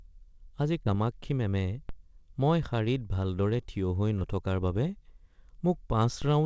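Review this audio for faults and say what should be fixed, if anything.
Short concealed packet loss occurs twice, from 0.84 to 0.87 s and from 4.19 to 4.23 s, where audio packets failed to reach the decoder in time. The receiver covered each gap by extending the preceding speech for 10 ms and then 20 ms, then crossfading back. Each event is heard as a brief smear or wobble, and a short consonant could drop out. To prevent this, give the jitter buffer more headroom and fix the network loss or late delivery.

A DC step occurs at 1.89 s and again at 6.22 s. The waveform's zero line suddenly shifts, as when a converter recalibrates or an input carrying an offset is switched in. The offset then bleeds away roughly as a 5 Hz high-pass filter would drain it. Each step is heard as a low thump or click while the speech continues unchanged, and the band above 8 kHz is empty, which fits a 64 kbps G.722 call path. 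To prevent this, stop the capture chain from switching or recalibrating mid-stream, or apply DC blocking before the encoder.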